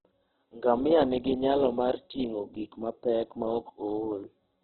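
The clip is speech, heavily damaged by Opus compression throughout. Nothing is heard above 4.1 kHz, so it sounds narrow and muffled. Tones turn rough, grainy and noisy. This is likely Opus in its CELT music mode, at a bitrate around 8 kbps.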